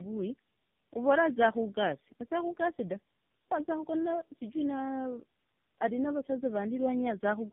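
The call was decoded and re-encoded at each network border, so this speech passed through three low-rate speech codecs in a row, a pattern consistent with AMR-NB, then GSM full rate, then AMR-NB again, joined by G.711 links. This is tandem speech coding: each coder works on the previous one's errors, compounding them. Throughout, the speech sounds rough, muffled and warbly, with nothing above 3.5 kHz.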